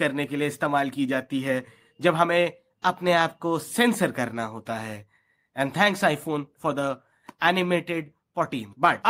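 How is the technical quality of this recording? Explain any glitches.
The speech recording has no technical faults to report; the signal is continuous and intact throughout, so there are no glitches to explain.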